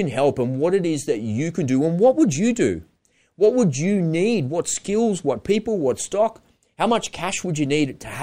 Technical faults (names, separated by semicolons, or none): clock slip clicks